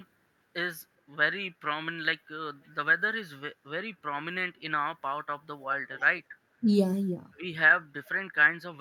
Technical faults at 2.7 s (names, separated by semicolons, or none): echo leak